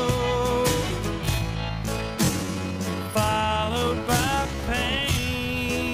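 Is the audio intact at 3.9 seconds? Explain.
No. At 3.9 seconds the audio sits inside a time-stretched section that runs from 1.19 s to the end of the clip at 5.94 s. Here the pace drops to about 0.6 times normal speed, yet the pitch stays put. The likely cause is software lengthening this stretch by repeating short pieces of audio to fill more time. That repetition makes the sound drag, and the slowdown starts abruptly.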